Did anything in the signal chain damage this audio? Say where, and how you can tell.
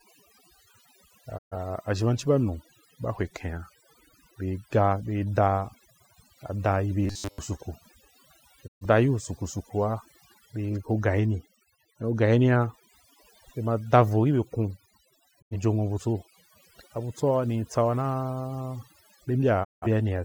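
Yes. Noise reduction processing was set far too aggressive across the whole clip: overdone noise removal leaves a near-silent, twinkling background.

A digital broadcast dropout at the receiver muted the audio four times, at 1.37, 8.66, 15.40 and 19.63 s. Each fades out over about 20 ms into a brief silent hole.

From 7.04 to 7.39 s, speech becomes a rigid metallic 100 Hz buzz. The likely cause is a buffer stage repeating short buffers, which fits a 10 ms segment.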